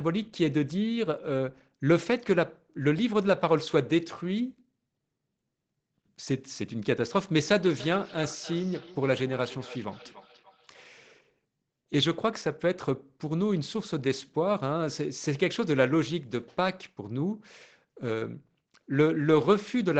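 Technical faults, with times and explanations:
7.55–10.91 s, feedback echo between two devices: the speech comes back roughly every 300 ms, each repeat thinner and more ringing, at most about 18 dB below the speech. A second device in the room plays the call aloud, and the first device's microphone picks it up again, where neither echo canceller can remove it.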